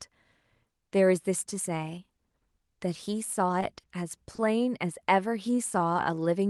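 At 3.80 s and again at 4.35 s there is a short stall from a late packet: the receiver held the current sound for about 30 ms each time until the data arrived, then carried on without skipping anything. Unlike a true loss, nothing goes missing; a sound just lingers with a faint buzz or dip.

From 5.47 to 6.16 s comes a jitter buffer slow-down, as the receiver repeats pitch periods to rebuild its reserve, adding about 55 ms and running at 94% speed. Pitch stays put, which separates it from a stall: the stretch is spread out, not a single held moment. Both faults sit on an Opus call path whose top end stops near 12 kHz, which fits a rate around 32 kbps.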